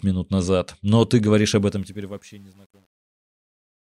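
From 1.6 s, right after "ты говоришь", the fade-out is handled by a stage that drops to too few bits without dither, which fits roughly a 9-bit path. This is truncation distortion on a fade. From about 2.05 s to the end, the fading speech turns gritty.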